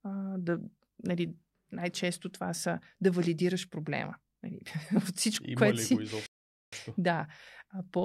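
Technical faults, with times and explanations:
6.26–6.73 s, playback stall: the player likely ran short of buffered data or had its output thread held up, so nothing reached the output for about 0.46 s. Right after "което ли си го" the speech cuts off abruptly into dead silence mid-phrase. The stream then resumes, and the gap reads as an unnatural hole in the speech rather than a pause a speaker would make.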